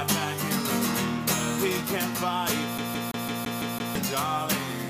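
From 2.78 s to 3.95 s the audio falls into the fast, even stutter of a CD stuck on one turn. A slice of about 168 ms repeats seven times, each pass separated by a brief mute where the playback jumps back. The mechanism is a scratch that knocks the laser back one track at the same point on every rotation, so the same short segment of audio replays until it breaks free.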